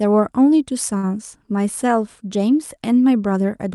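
A short stall from a late packet occurs at 0.97 to 1.06 s in this speech. A packet failed to arrive on time, the jitter buffer ran dry, and the receiver stretched the last sound for about 56 ms until the data turned up. Playback then resumed from the same point, so no speech is lost, but the sound is held unnaturally long with a faint buzz or dip, and everything after plays 56 ms later. The call codec limits the band near 12 kHz throughout.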